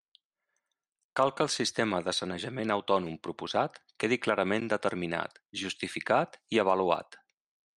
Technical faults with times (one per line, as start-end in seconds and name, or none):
1.12-6.95 clock drift buffer slips